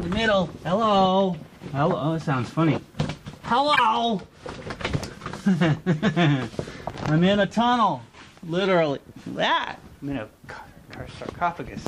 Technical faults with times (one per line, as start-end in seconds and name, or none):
3.73-3.79 corrupt frame decoded